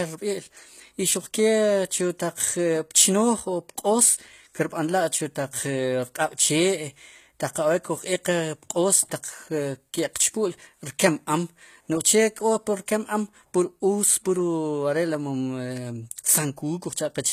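Speech runs throughout with plainly audible HE-AAC compression damage. The treble sounds synthesised rather than captured, s sounds come out gritty and lispy, and nothing reaches above 14.9 kHz. The likely cause is spectral band replication copying lower bands upward, which fits a bitrate near 20 kbps.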